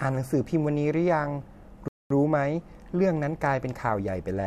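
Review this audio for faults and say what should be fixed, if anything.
At 1.88 s the speech drops abruptly into silence and holds there until 2.10 s, then picks up at exactly the point where it broke off, with nothing skipped. This is a rebuffering stall: playback consumed all the audio it had downloaded and had to wait for more before continuing, so about 0.22 s of dead air is inserted into the clip. To prevent it, keep a larger playback buffer or use adaptive bitrate so delivery stays ahead of playback.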